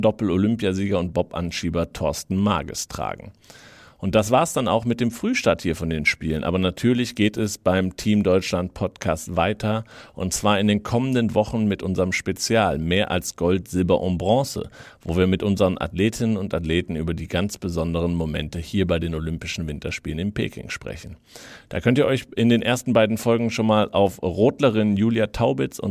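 No technical faults can be heard anywhere in the speech recording. There is nothing to mark at any point in the audio.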